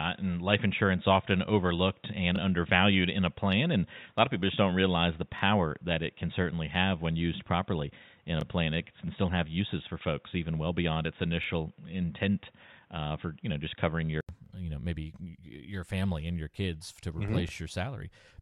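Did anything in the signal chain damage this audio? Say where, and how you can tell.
Yes. At the input stage, up to 14.29 s nothing passes above 3.8 kHz and noise sits about 45 dB below the speech, then an 80 ms gap: likely an input switched to a poorer device.

At the buffer stage, overlapping chunks replay 25 ms at each 3 s join, heard as stutters at 2.36, 5.39, 8.41, 11.44, 14.46 and 17.49 s.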